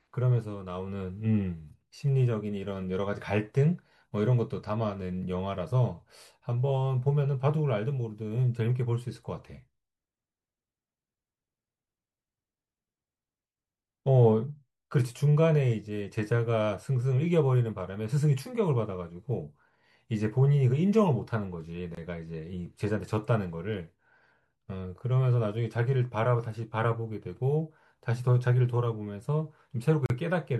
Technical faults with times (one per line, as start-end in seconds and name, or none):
21.95-21.97 gap at a join of encoded pieces
30.06-30.10 gap at a join of encoded pieces